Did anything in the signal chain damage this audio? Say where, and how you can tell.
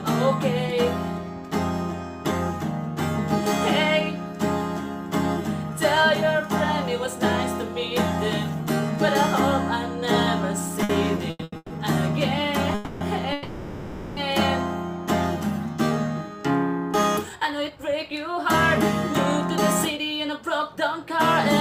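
Yes. At the converter, sample clock jitter of a couple of microseconds throughout adds a hiss-like roughness, about 35 dB below the signal, that tracks loud, bright passages.

In the network path, repeated stalls (stutter) from 10.83 to 11.73 s: the buffer ran dry five times, filling 390 ms with held-over sound, the longest gap 140 ms, so the audio drags.

Two call audio freezes, at 12.75 to 13.04 s and 13.33 to 14.20 s, stretch the last sound into a fading buzz for 260 and 840 ms before resuming, likely from packets held up in transit.

Jitter buffer speed-up from 17.29 to 18.46 s and 19.97 to 21.18 s cut short pitch-period slices, running 7% and 6% fast at unchanged pitch and sounding hurried.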